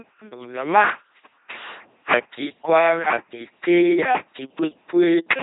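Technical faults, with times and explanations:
Throughout, LPC-10 vocoder: buzzing, robotic speech with nothing above 3.8 kHz, as pulse-or-noise excitation replaces the voice, unlike smeary transform codecs; fits 2.4 kbit/s.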